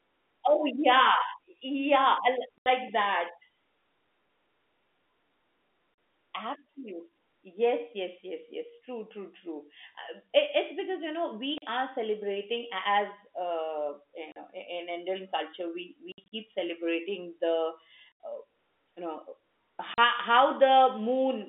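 Packet loss filled with silence cuts hard-edged holes at 2.58, 5.94, 11.58 (after "it's because you know"), 14.32, 16.12, 18.18 and 19.94 s. The gaps run 40 to 120 ms, which fits 20 ms packets.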